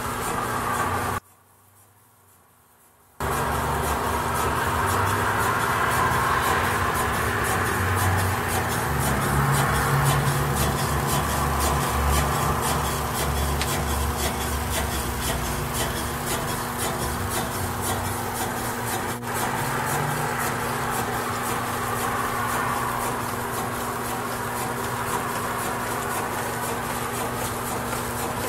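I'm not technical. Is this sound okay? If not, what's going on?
No. Mains hum: the recording picked up electrical interference from the power supply, adding a steady low 60 Hz buzz, clearly audible, under the whole clip. From 1.18 to 3.20 s, one channel inverted, likely one side of a stereo signal wired with reversed polarity, makes the sound almost disappear when the two sides are combined.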